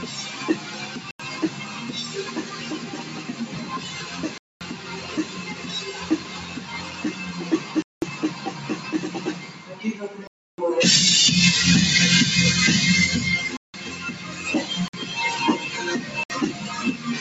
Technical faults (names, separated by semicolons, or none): noise suppressor applied to music or sounds; block of digital silence